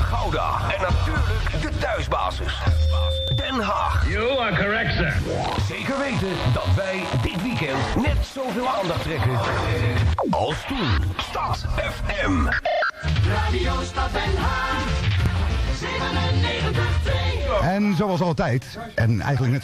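The audio has three brief skips, at 3.28 s, 7.27 s and 15.26 s. Each is an overlap between stream segments. The stream arrives in segments of about 4 s. At these joins, the time stamps of neighbouring segments claim the same stretch of time. The player trims that shared stretch away, though the sound there was never duplicated. So a short piece of real audio is lost, and the waveform jumps across the gap.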